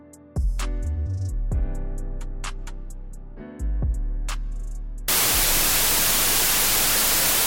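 From 5.08 s to the end, the audio turns into loud noise with the original buried inside, playing at half speed and an octave low. The sound fits a wrong sample width, with 32-bit integer samples read as 16-bit, so each sample becomes two mismatched values.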